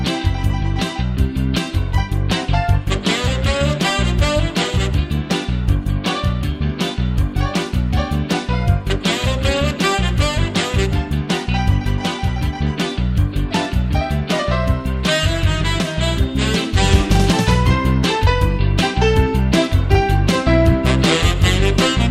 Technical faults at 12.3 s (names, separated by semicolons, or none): none